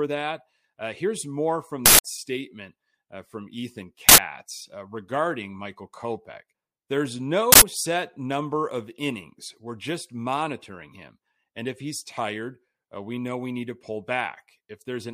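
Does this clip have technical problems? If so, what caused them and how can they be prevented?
Yes. Three times the speech is cut by a short, very loud burst of harsh digital noise: from 1.86 to 2.04 s, from 4.09 to 4.18 s, and from 7.52 to 7.62 s. These are uninitialised buffers. A block reached the output before any audio was written into it, so leftover memory contents played as samples. The first burst lasts about 186 ms, which fits an 8192-sample block. The later two last about 93 ms, consistent with 4096-sample blocks. To prevent this, clear every buffer to zero when it is allocated and release it to playback only after it has been filled.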